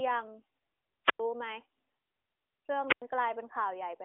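At 1.04 s the speech hits a wireless microphone squelch dropout lasting until 1.20 s. The radio signal fades, hiss rises briefly, and the receiver's squelch mutes the output for about 98 ms before the voice returns. The same dropout recurs from 2.87 to 3.02 s, with a mute of about 96 ms. Both gaps sit inside narrowband mobile-codec audio with nothing above 3.7 kHz.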